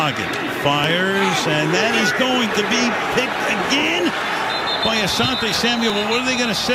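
From 0.84 to 5.90 s, about four clicks recur every 1.69 s. These are clock drift buffer slips, likely from mismatched device clocks dropping or repeating samples.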